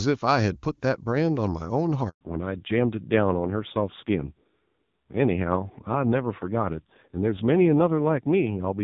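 A handover gap at 2.09 s cuts this speech clip off for 120 ms. The call switched networks and no speech frames arrived during the move, so the sound dies away almost at once and stays silent until 2.21 s. Whatever was said in that stretch is lost. A fallback to narrowband follows, from 2.21 s to the end, after the clean HD Voice heard before the gap. Nothing above 4 kHz survives, and the duller, rougher texture fits a low-rate narrowband AMR mode near 5.9 kbit/s taking over from wideband AMR at around 23.85 kbit/s.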